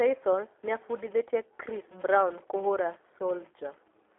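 From start to finish, a steady buzz rides under the speech. This is a filter restarted on every block. It loses its memory at each block edge and begins again from silence. Each restart leaves a tiny click. At 375 Hz, the clicks fuse into a buzz that fits 128-sample blocks. It grows louder and softer with the speech.

Also throughout, the speech passes through the G.729 codec at 8 kbit/s. The band runs from 300 Hz to 3.5 kHz, so nothing above 3.5 kHz survives. The codec models the voice instead of copying it. The damage is plainly audible: the speech sounds thin, rough and synthetic.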